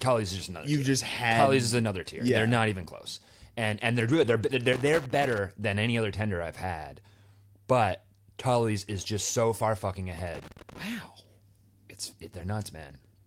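At 2.85 s, right after "not even", there is a short concealed packet loss. About 20 ms of the stream did not reach the decoder in time. The receiver bridged the hole by extending the preceding sound, roughly 14 ms of synthesised continuation blended back into real audio. It comes across as a brief smear or wobble rather than a clean gap.

Immediately after, from 2.89 to 2.95 s, comes a lost packet rebuilt from error correction. The 40 ms span fits two consecutive 20 ms packets lost and then recovered from the low-bitrate redundant copies carried in the packets that followed. There is no dropout, but this stretch sounds rougher and noisier than its surroundings. A longer instance runs from 4.09 to 4.55 s, following "and they're". It covers 240 ms, which fits a run of about a dozen lost packets, all played from in-band FEC. Nearly a quarter of a second takes on a coarse, grainy quality before the full-rate stream resumes.

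Loose connector crackle follows, from 4.73 to 5.38 s and again from 10.12 to 10.83 s. Each burst lasts roughly 0.65 to 0.7 s. A worn or dirty contact in the analogue path was making and breaking intermittently, chopping the signal on and off in rapid, irregular fashion. The result is a scratchy, uneven crackle laid over the audio, unrelated to the network-side faults earlier in the clip.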